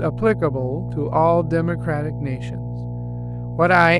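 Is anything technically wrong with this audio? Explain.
Yes, there are two problems. The first is mains hum, present for the whole length of the speech. It's a steady low drone at 60 Hz, and it's fairly loud, sitting only about ten decibels under the voice, so you notice it even behind words. That usually means a ground loop or a transformer close to the cabling, with the power line leaking into the signal path and adding that constant buzz plus a few low harmonics.

The second is hard clipping near the end, from 3.75 to 3.87 s. For that stretch the signal was pushed roughly 3 dB past what some stage in the chain could pass, so the peaks got sheared off flat. Those squared tops create high-frequency harmonics, which is why that short moment has a brief harsh crackle on the loudest parts instead of a clean peak.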